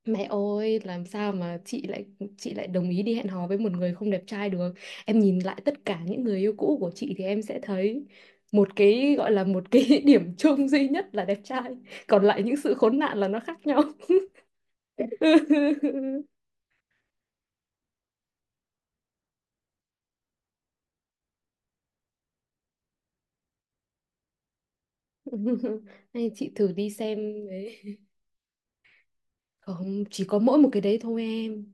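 No technical faults can be heard anywhere in the speech.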